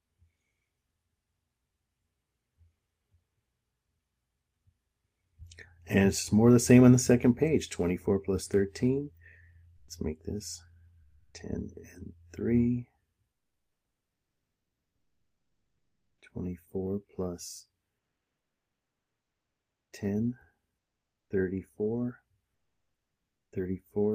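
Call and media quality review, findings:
Comfort noise in place of the background, likely from discontinuous transmission (Opus-style DTX): sender stops coding during low-level stretches, receiver fills them with synthetic shaped noise. Real background swapped for flat, featureless hiss that drops in level: 9.76–9.88 s (120 ms, about 8 dB down), 11.02–11.34 s (320 ms, about 6 dB), 13.32–16.22 s (2.9 s, about 4 dB), 22.54–23.52 s (980 ms, about 12 dB).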